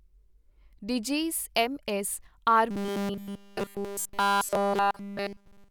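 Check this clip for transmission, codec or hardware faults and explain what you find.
The clip has one fault. From 2.71 s to the end, robotic sound from repeated short buffers: the speech becomes a rigid 200 Hz metallic buzz, likely from starved playback looping an approximately 5 ms buffer.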